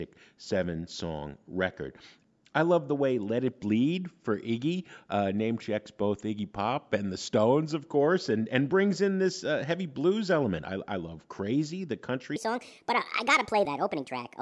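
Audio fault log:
12.36 to 14.41 s: wrong sample rate. Speech turns 1.5 times faster and 7 semitones higher at once, fitting 16 kHz audio played at 24 kHz. A pitch shift would leave timing unchanged.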